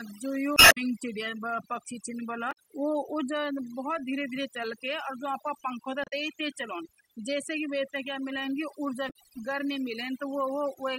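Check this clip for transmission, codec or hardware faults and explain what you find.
Two faults are present in this speech clip: heavy-handed noise reduction across the whole recording, and four short bursts of corrupted compressed data.

Overdone noise removal runs throughout. The reduction is set so aggressively that individual frequency bands near the estimated noise level are pulled almost to nothing, taking quiet parts of the voice with them. The background sits near silence with twinkling specks. Unlike low-bitrate codec smearing, the artefacts track the noise floor, not the loudness of the speech.

Damaged data in the compressed stream appears at 0.54 to 0.78 s, 2.48 to 2.58 s, 6.04 to 6.13 s and 9.07 to 9.16 s. At each point the decoder misreads frames and loses sync while it hunts for the next valid header, producing a brief chirp, squawk, click or short hole.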